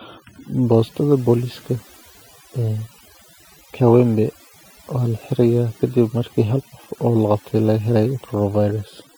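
Overdone noise removal runs through the whole clip. A noise reduction stage was driven too hard against a noisy recording, so every frequency band that sits close to its noise estimate gets pulled far down or switched off entirely. The quieter components of the speech fall below that threshold and vanish along with the noise. The background collapses to near silence dotted with twinkling specks.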